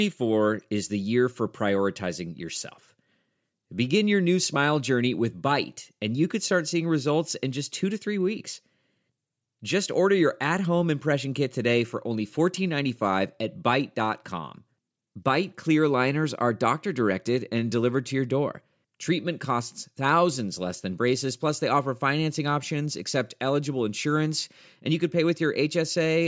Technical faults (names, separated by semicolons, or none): none